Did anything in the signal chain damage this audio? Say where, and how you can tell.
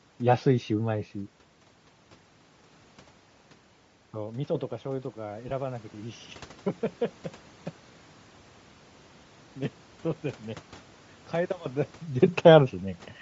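Yes. At the codec stage, the speech has a breathy, grainy edge with a noise-filled top end the whole way through. That's likely Bluetooth LC3 compression at around 32 kbps.

In call processing, there's automatic gain rising from 4.12 to 6.27 s. Voice and background swell together by about 5 dB as the gain control chases the quieter input after the talker moves back.

On the Bluetooth link, there are lost LE Audio frames from 5.49 to 5.51 s. You hear a 20 ms noisy smear where the decoder reused the last spectrum with random signs, which fits two 10 ms frames.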